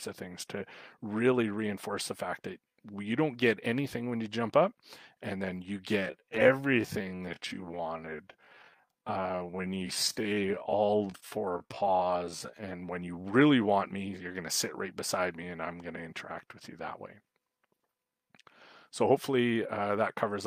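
From 5.94 s to 12.72 s a time-stretched section slows the audio to about 0.61 of its normal pace, and the pace shifts abruptly at both edges. The pitch holds steady throughout, which separates it from a slowed playback or tape-speed fault, where pitch would sag along with tempo. The stretched stretch drags, as if each moment lingers, most likely because software repeated short slices of audio to lengthen that portion.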